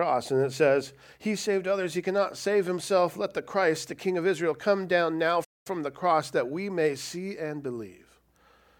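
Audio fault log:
5.44–5.67 s, playback stall: the speech halts mid-flow into silence for 211 ms, then sound resumes, likely because the player ran out of data or its thread was blocked. A brief dropout would lose only milliseconds; this gap lasts a fifth of a second.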